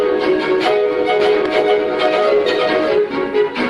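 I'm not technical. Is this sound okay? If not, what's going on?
No. From 1.2 to 2.98 s there's a doubled audio track: a slightly quieter copy trails about three quarters of a second behind, likely from the sound being captured twice.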